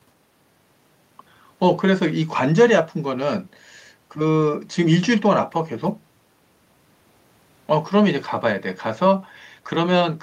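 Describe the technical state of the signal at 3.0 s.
At 3.0 s the speech signal is intact, with no audible fault at that moment.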